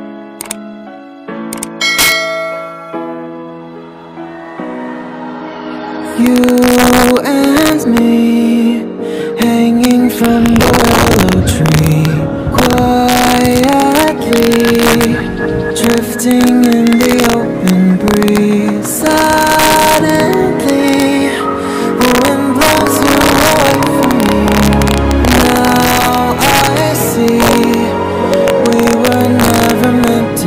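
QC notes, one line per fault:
Throughout, integer overflow: peaks about 5 dB over full scale wrap to the opposite sign rather than flattening as clipping would, so they crack violently.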